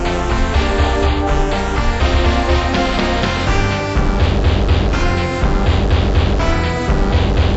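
The whole clip plays at half speed and a full octave low, 12 semitones down. This is stereo read as mono. The left and right samples were stored interleaved, but the player took them as one channel in sequence. Every sound therefore stretches to twice its length and drops in pitch. A fainter mirrored copy of the audio also appears in the upper half of the spectrum. The fault runs from start to finish.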